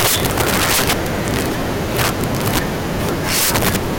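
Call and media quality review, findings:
Violent cracks on louder speech peaks throughout. Integer overflow: gain stage overdriven by about 42 dB wraps peaks to opposite sign instead of saturating, affecting roughly one sample in twenty.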